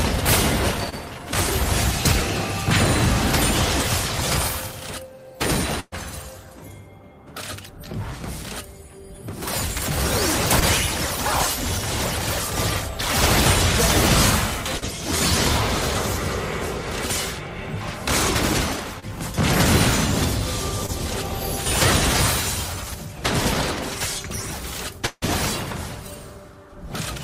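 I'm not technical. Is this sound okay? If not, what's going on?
No. The audio was sent over a network, and at several points pieces of it arrived too late or not at all.

The most frequent problem is short concealed packet loss, at 0.89, 10.60, 14.77, 19.00 and 20.86 seconds. Each time, a sliver of sound, about 20 milliseconds (40 at 14.77), never reached the receiver. The receiver papered over the hole by stretching out whatever came just before, so you hear a tiny smear or wobble rather than a clean gap.

At 5.80 to 5.94 seconds there is a burst of packet loss: several pieces in a row went missing, about 120 milliseconds in all. The receiver kept the last sound going while letting it fade, so you hear a brief held buzz or hiss, a moment of near-silence, and then the audio picks up again with that bit skipped.

Around 25.06 to 25.24 seconds, about 160 milliseconds of sound is gone. What you hear is the last sound carrying on and fading, then a short silence before the audio returns further along. 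The likely cause is a long network dropout, where the connection briefly delivered nothing at all.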